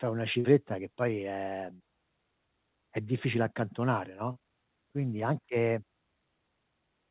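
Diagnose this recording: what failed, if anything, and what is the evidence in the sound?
Short concealed packet loss, network stage, handled by the receiver's concealment. At 0.40–0.47 s, 1.76–1.83 s and 4.32–4.39 s the speech briefly smears or wobbles. Each time about 40 ms of audio arrived too late for the decoder, and the receiver filled the gap by extending the preceding sound before crossfading back. The 4 kHz band limit throughout fits a G.711 A-law call path.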